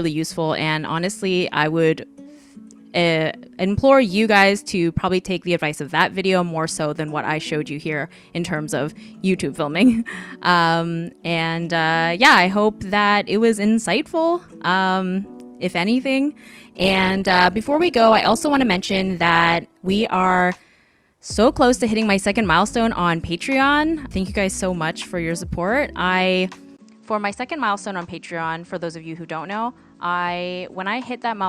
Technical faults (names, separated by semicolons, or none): adaptive stream at a lower bitrate; input switched to a poorer device